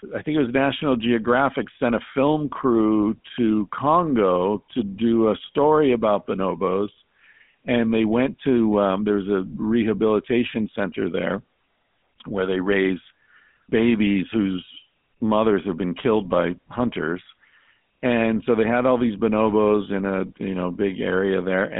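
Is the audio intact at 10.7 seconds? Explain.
No. GSM full-rate codec coloring runs throughout, including 10.7 s. Pulse-driven vocal-tract modelling makes speech buzzy and gravelly, band-limited to 150 Hz–3.5 kHz, nothing above 3.8 kHz.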